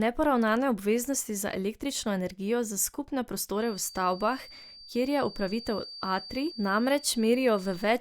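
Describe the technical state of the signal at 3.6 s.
A feedback whistle runs from 3.52 s to the end, just after "električno energijo za skupne": a thin 4.6 kHz tone that slowly swells and fades, well below the speech, likely from a loudspeaker-to-microphone loop held at the edge of feedback.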